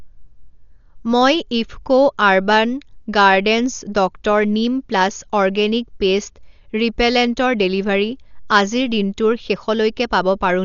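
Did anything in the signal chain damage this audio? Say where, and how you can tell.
Yes, at the codec stage. Throughout the speech, nothing reaches above 7 kHz, so it sounds dull. A rough, fluttering noise clings to tonal parts. This is likely Dolby Digital compression at a low bitrate, near 48 kbps. Starved frequency lines get filled with dither noise.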